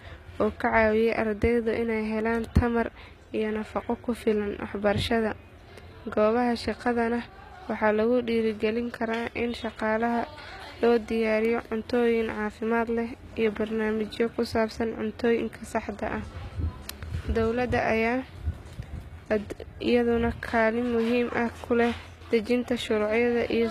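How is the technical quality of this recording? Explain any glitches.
The recording has plainly audible codec damage throughout the speech. Its treble is bright but synthetic, and it stops dead above 14.9 kHz.

The likely cause is HE-AAC compression, at a rate that fits roughly 20 kbps. The codec keeps only the lower spectrum and fakes the top by copying lower bands upward under a coarse envelope. The rebuilt harmonics don't match the real ones, so s sounds come out gritty, metallic or lispy. Unlike a plain low-pass filter, which leaves dull treble, the top here still sounds present, just wrong.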